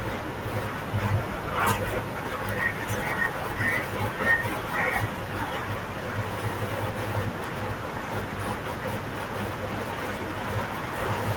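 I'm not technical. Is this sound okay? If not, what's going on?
Yes, this sound is okay, and nothing is going on that needs fixing.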